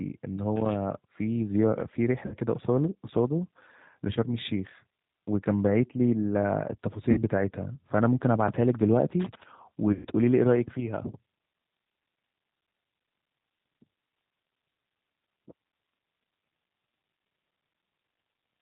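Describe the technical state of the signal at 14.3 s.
At 14.3 s the speech carries G.729 codec damage, present across the whole clip. It is rebuilt from a vocal tract filter, pitch predictor and sparse pulses at a rate that fits 8 kbit/s, so it sounds rough and synthetic. A spectrogram shows a flat ceiling at 4 kHz.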